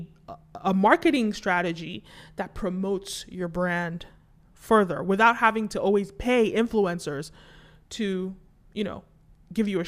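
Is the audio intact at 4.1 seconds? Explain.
Yes, just barely. DAB burbling ends at 4.06 s, having started at 3.89 s. Weak-reception bit errors corrupt several MP2 frames, so short blips of noise hit single sub-bands.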